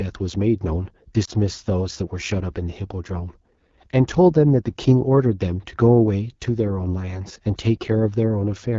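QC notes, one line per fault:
throughout: AMR wideband (HD Voice) codec, with plainly audible damage. The sound is rough and raspy, which fits one of the two lowest AMR-WB rates, around 8.85 kbit/s. A spectrogram shows detailed energy stopping near 6.4 kHz, with smeared noise filling the band up to 7 kHz.
1.25–1.30 s: lost AMR speech frames, heard as a brief dip or warble, which fits a single lost 20 ms frame. The decoder repeated the last good pitch and vocal tract settings at reduced gain. The waveform shows a short amplitude sag before normal level returns.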